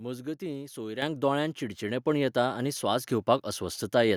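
At 1.02 s the microphone volume stepped up. The call software judged the input too quiet and raised the device gain in a single jump of about 8 dB. Speech and background noise both get suddenly louder together, with no fade.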